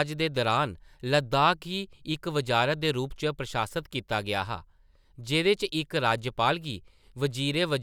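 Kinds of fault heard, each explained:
No technical faults can be heard in this recording.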